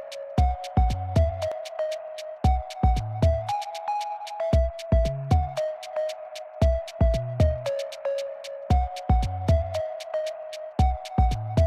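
No technical faults can be heard anywhere in the clip, and the signal holds steady and continuous throughout.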